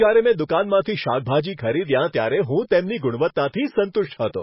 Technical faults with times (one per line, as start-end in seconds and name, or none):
0.00-4.42 MP3 compression